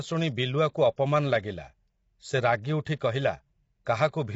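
Throughout the speech, low-delay AAC compression, likely AAC-ELD at a rate that fits about 24 kbps, leaves the voice plainly rough and grainy. Its short frames smear the harmonics, so a spectrogram shows noise filling the gaps between them and nothing above 7.7 kHz.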